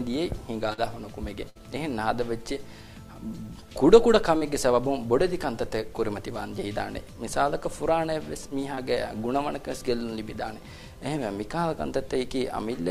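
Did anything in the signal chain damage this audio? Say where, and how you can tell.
Yes, the network path took some hits. There's short concealed packet loss at 0.73 s, 4.37 s and 8.75 s. Each is a quick smear where the sound seems to wobble for a moment. The first two fill about 40 ms, the last about 20 ms. That's the receiver covering for audio that didn't arrive in time by extending what it last had, then cross-fading back into the real signal.

At 1.50 s there's a longer one, a burst of packet loss with about 60 ms gone. Several packets in a row, or one long packet, arrived too late or not at all. Instead of a brief smear you hear the last sound stretched into a held buzz or hiss that fades as the concealment runs on. When the audio picks up again, it has skipped that stretch entirely.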